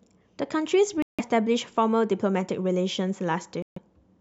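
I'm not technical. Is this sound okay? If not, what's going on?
No. A Bluetooth dropout at 1.02 to 1.21 s and 3.62 to 3.78 s briefly silences the speech, which then resumes further along. Late wireless packets were likely dropped.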